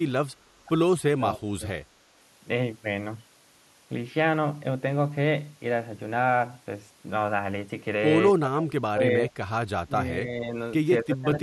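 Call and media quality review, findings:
Speech dips at 0.00–0.05, 1.10–1.66, 8.33–9.04, 9.23–9.35, 9.84–10.54 and 11.02–11.43 s, deepest around 1.1–1.7 s (about 30 dB) and 8.3–9.0 s (about 25 dB), others about 15 dB. Likely speech suppressed in double talk: the echo canceller, unable to tell near talker from loudspeaker echo while both sides spoke, attenuated the whole uplink.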